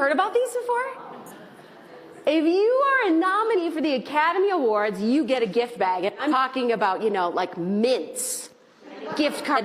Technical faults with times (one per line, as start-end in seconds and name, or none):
1.26-1.31 damaged data in a compressed stream
3.53-3.59 damaged data in a compressed stream
6.27-6.33 damaged data in a compressed stream
9.52-9.58 damaged data in a compressed stream